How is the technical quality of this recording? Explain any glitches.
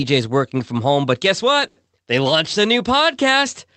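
One glitch stands out, in speech carried over a call codec that cuts the top end near 8 kHz. At 1.67 to 1.79 s, just after "from home but guess", there is a short stall from a late packet. The jitter buffer ran dry, so the last sound was stretched by about 90 ms. Nothing is lost, but it drags slightly.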